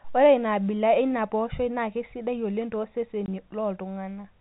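At 3.26 s a single packet of speech went missing in transit and the receiver had nothing to conceal it with, so it simply played silence for the gap: packet loss filled with silence. The hole lasts 20 ms, which points to one 20 ms packet, and because the waveform is cut off and resumes abruptly, the dropout is heard as a brief gap with hard edges rather than a smooth fade. The speech runs through G.711 telephone coding, so nothing above 4 kHz is present.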